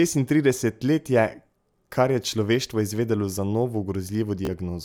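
At 4.45 to 4.50 s, a Bluetooth stutter: lost packets made the receiver repeat its last slice as a brief buzz rather than a silent dropout, and about 30 ms went missing.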